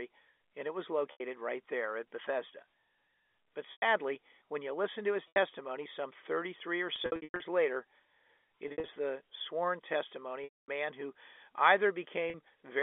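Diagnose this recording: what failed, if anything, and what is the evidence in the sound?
Network stage: packet loss with pitch repetition. Held, buzzy gaps occur at 1.12, 3.72, 5.28, 6.96–7.40, 8.68–8.96 and 12.3 s; the longer gap at 10.44–10.68 s fades into silence before the speech cross-fades back in. The receiver loops the last pitch period.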